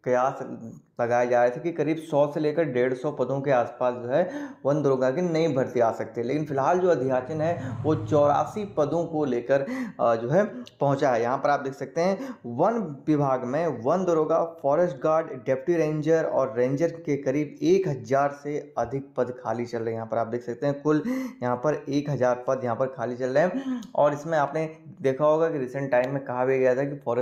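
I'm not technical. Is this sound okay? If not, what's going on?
Yes, the sound is technically sound, with nothing going wrong in the recording or playback at any point.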